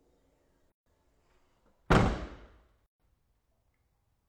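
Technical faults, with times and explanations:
0.72–0.86 s and 2.86–3.00 s, gap at a join of encoded pieces: separately encoded segments, repeating every 2.0 s, were joined with their start delay and final-frame padding left in, so gaps of 142 and 136 ms cut in. Waveforms drop to flat with smeared edges; spectrograms show blank vertical bands before the sound resumes where it stopped.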